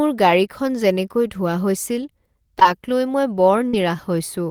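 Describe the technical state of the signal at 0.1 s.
At 0.1 s the speech signal is intact, with no audible fault at that moment.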